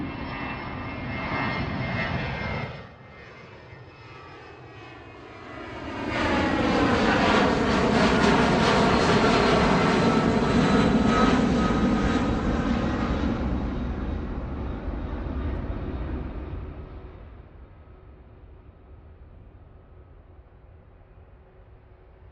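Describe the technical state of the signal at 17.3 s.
At 17.3 s a fast ticking rides on the sound: zipper noise, from 16.2 to 17.72 s, as the level falls by roughly 15 dB in unsmoothed steps, around 30 a second.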